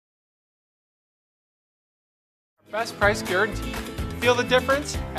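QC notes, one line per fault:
No fault to note.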